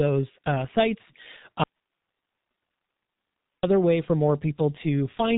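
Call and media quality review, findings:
G.723.1 codec damage throughout: muffled, hoarse speech, smeared consonants, nothing above 3.8 kHz. The low-rate 30 ms frame coding is chewing it up hard; the sound points to something around 6 kbit/s. Vocoder model can't track fast changes.

Audio dropout to a faint residue, 1.64 to 3.63 s: the speech cuts out abruptly for about 2.0 s, leaving just hiss sitting way down, around 50 dB under the speech. Likely an upstream source or link loss while the downstream path stayed live.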